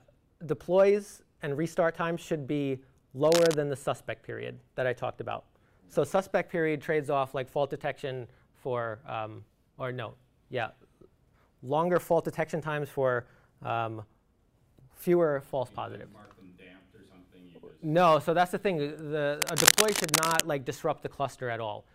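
At 3.28 to 3.54 s, cable scratch noise appears as a brief, ragged rustle just below the signal. From 19.40 to 20.41 s a longer burst rises to roughly signal level. Likely cause: a worn cable or connector moving, its contact resistance fluctuating.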